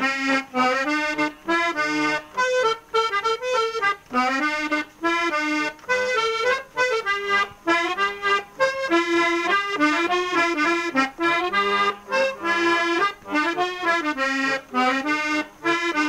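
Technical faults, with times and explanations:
No technical faults can be heard anywhere in this clip.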